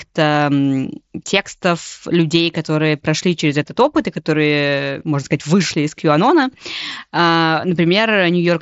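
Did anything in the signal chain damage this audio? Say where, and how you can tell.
No, nothing in the signal chain damaged this speech. It carries the sound of a Bluetooth headset link on the mSBC codec, with nothing above about 7.7 kHz and only a light grain on the louder passages.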